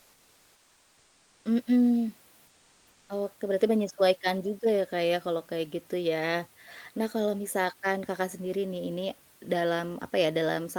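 From 0.00 to 1.45 s, and again from 2.47 to 3.09 s, the background turns into comfort noise. The real room sound gives way to a steady, featureless hiss, about 2 dB quieter. The likely cause is discontinuous transmission, as in an Opus-style codec: the sender pauses while no speech is detected, and the receiver fills the gap with synthetic noise. When speech resumes, the live room noise returns, sitting about 34 dB below the speech.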